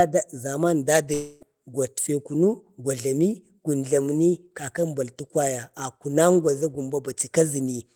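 From 1.13 s to 1.43 s the speech breaks off and is replaced by a buzzy, smeared continuation of the last sound that fades over the stretch. The sound then resumes with about 280 ms of material simply gone. This is likely a long network dropout, with the receiver filling the gap by extending the final fragment. On a spectrogram the harmonics flatten into smooth, repeating bands that dim steadily. The waveform shows a decaying, periodic envelope, with no true silence before the abrupt return.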